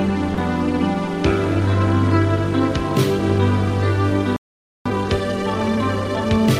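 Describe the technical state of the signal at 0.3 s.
Sound dropped by the voice detector, from 0.34 to 0.37 s: about 30 ms of the music gives way to comfort noise. This is likely Opus DTX, whose detector mistook the music for background, stopped sending, and let the receiver fill the gap until the detector triggered again.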